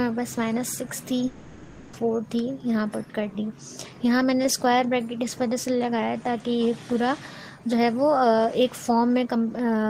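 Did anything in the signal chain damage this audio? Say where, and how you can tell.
Yes. From 1.27 to 1.95 s the sound stops carrying anything new. The last moment is drawn out into a buzzy, hissing continuation that fades across about 0.66 s, and then the audio resumes further along, with that stretch simply gone. The stage is likely the network: a long network dropout left the receiver's concealment to fill the entire 660 ms gap by extending the final received audio until real packets arrived again.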